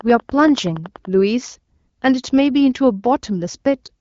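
From 0.01 to 1.06 s, a train of clicks runs over the speech. About ten sharp, similar pulses arrive at a steady 10.5 per second. Each peaks roughly 5 dB above the sound. The regular ticking likely comes from interference by nearby equipment.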